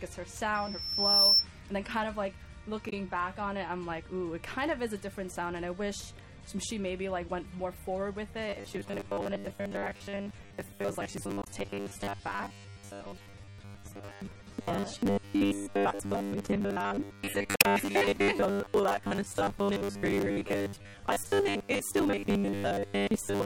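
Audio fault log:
0.54 to 1.47 s, loudspeaker feedback squeal: a 5.4 kHz tone swells over most of a second to about 10 dB above the sound, because the mic-speaker loop is running away.
2.89 to 2.93 s, 11.42 to 11.47 s and 17.54 to 17.65 s, damaged data in a compressed stream: brief glitches as the decoder trips over bad frames and resyncs.
8.5 s to the end, robotic sound from repeated short buffers: a stiff metallic 100 Hz buzz, likely from short chunks being replayed in place of most of the real audio.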